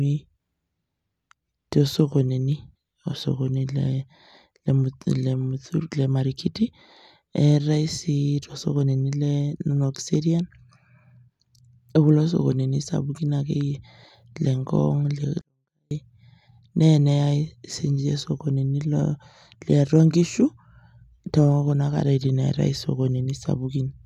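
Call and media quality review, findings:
Speech drops almost to silence at 15.41 s, back at 15.91 s, so about half a second. Clean but about 48 dB down. Looks like a 24-bit alignment error (too quiet): 24-bit samples sitting in the low bytes of 32-bit words got read as full 32-bit integers, shifting everything down 8 bits. Probably a format mismatch in the capture or mixing stage.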